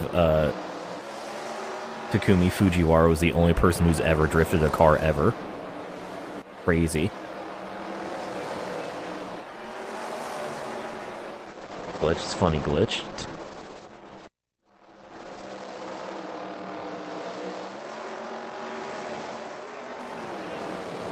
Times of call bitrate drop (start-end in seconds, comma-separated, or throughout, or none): 11.50-20.05